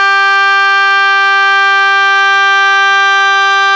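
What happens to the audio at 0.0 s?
At 0.0 s the music is intact, with no fault at that moment beyond the call path's normal band limit, which leaves nothing above 8 kHz.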